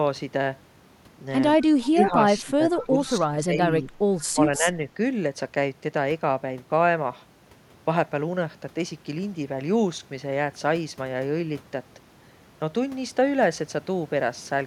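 Right at 1.83 s the speech starts ducking. That's speech suppressed in double talk, most likely the echo canceller hearing both ends at once and turning everything down. It sags by about 20 dB until 2.16 s, then again from 2.44 to 2.97 s. From 3.20 to 3.62 s it drops by about 15 dB. Shorter dips follow at 3.83–3.91 s and 4.58–4.67 s, both shallow at about 5 dB, and at 4.32–4.40 s, about 15 dB down.

In between you get echo leak. At 2.35–2.41 s and again at 3.06–3.11 s there's a faint scrap of the voice coming back 157 ms late, about 25 dB under the speech. That's likely a loudspeaker on one end whose echo canceller let a bit of its own pickup slip through and sent it back. It's short, just a brief ghost behind the talker.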